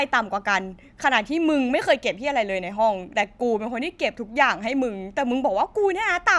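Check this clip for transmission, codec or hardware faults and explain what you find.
No faults turn up anywhere in this clip.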